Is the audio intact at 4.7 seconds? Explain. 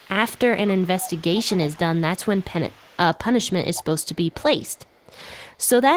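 No. From 4.61 to 5.13 s an echo leak lets a very faint delayed copy of the speech trail behind the original, arriving about 233 ms late and sitting roughly 40 dB below it, so it comes across as a quiet ghostly shadow rather than a clear repeat. The likely cause is a far end playing the call through a loudspeaker, where the echo canceller failed to fully remove what its microphone picked up and sent the remainder back.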